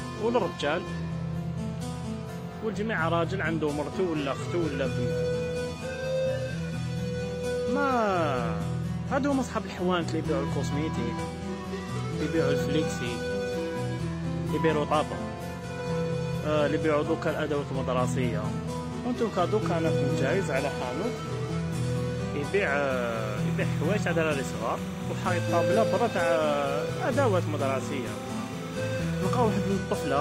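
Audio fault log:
22.90–29.77 s, timecode bleed: a chirping warble roughly 20 dB below the sound, as 30-frame linear timecode leaks across and its square wave flips between tones near 1 kHz and 2 kHz; a spectrogram shows two steady flickering bands there.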